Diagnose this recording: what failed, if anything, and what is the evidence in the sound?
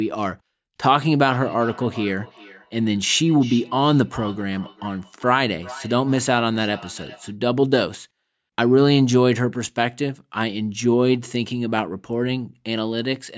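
What failed is a feedback echo between two devices, which sits at the call-processing stage. From 1.31 s to 7.35 s the speech comes back at a steady interval of roughly 0.4 s, peaking at about 19 dB below the direct speech. A second device in the room is playing this call out loud, and this microphone picks it up again. The echo canceller only knows about its own device's output, so it lets that loop straight through.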